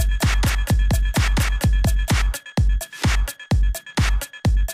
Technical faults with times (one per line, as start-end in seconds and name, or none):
0.00-2.12 doubled audio track